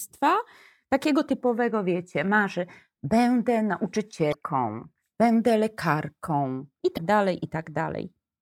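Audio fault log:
4.30–4.35 s and 6.94–6.98 s (the second just after "będę lekarką i"): damaged data in a compressed stream. Each is a short glitch lasting about 45 ms. Corrupted bytes in the encoded stream garble those frames. The decoder loses sync and hunts for the next frame header.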